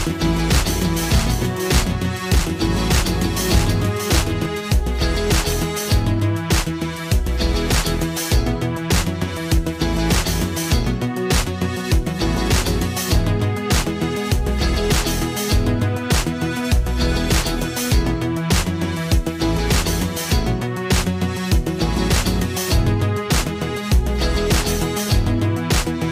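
From the start of the clip until 4.46 s, a doubled audio track trails the sound by roughly 0.7 s at about 5 dB lower, likely a second capture path running late. Unlike an echo, the copy stays full-band and undecayed, without room colour, and cuts off abruptly.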